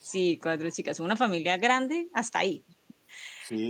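Right at the start, from 0.08 to 0.16 s, there's a brief echo leak: a faint delayed copy of the speech trailing about 407 ms behind, roughly 30 dB down. It's likely a far-end loudspeaker whose echo canceller let a scrap of its mic pickup slip back.

Near the end, between 3.52 and 3.57 s, the speech takes a quick, shallow dip of a few dB, just a momentary sag. That's speech suppressed in double talk, likely the canceller briefly mistaking this talker for echo while both sides overlapped.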